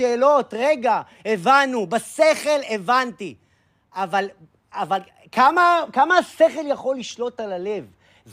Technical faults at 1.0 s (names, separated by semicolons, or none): none